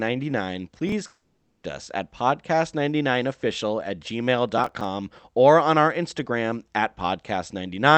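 From 0.72 to 0.92 s the processor falls behind its deadlines, so a run of about five very short audio buffers, each a few milliseconds long and pointing to something like a 3 ms buffer size, are skipped outright. Each skip leaves a hard-edged jump, and together they make a short burst of processor overload crackle, a gritty tearing laid over the speech that stops once the load clears.

From 1.07 to 1.65 s the incoming audio stops, likely a long network dropout. The receiver first stretches the last sound into a fading buzzy tail, then leaves about 0.34 s of near silence. Speech resumes at "us at", with roughly 0.56 s of the original simply gone rather than delayed.

From 4.58 to 4.84 s a second overload skips about seven of those tiny buffers. A longer crackling tear follows, ending just before "or on our".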